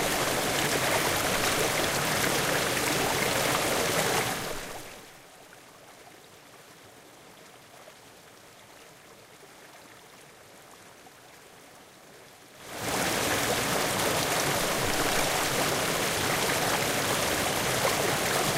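No technical faults can be heard anywhere in this recording of sounds.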